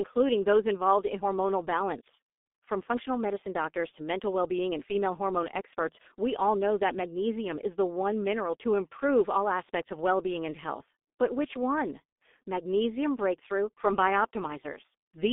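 Throughout the speech, the signal has passed through the G.723.1 codec, whose coarse coding, fitting a rate near 6 kbit/s, heavily damages it. The band is held to 200 Hz to 3.6 kHz, so the voice sounds muffled and hoarse, with smeared consonants.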